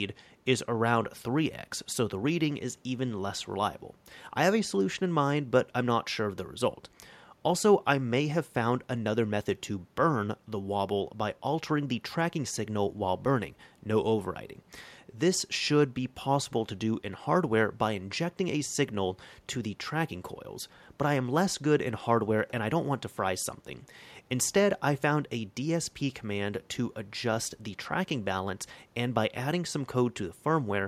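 No dropouts, clicks, distortion or level jumps turn up anywhere in the speech.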